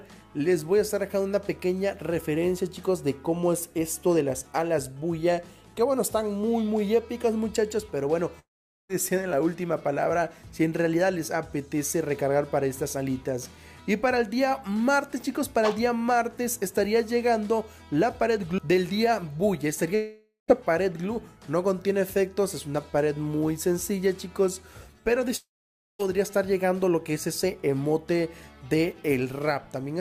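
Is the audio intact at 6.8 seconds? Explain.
Yes, the audio at 6.8 seconds is intact, with no dropout, click, distortion or other fault at that moment.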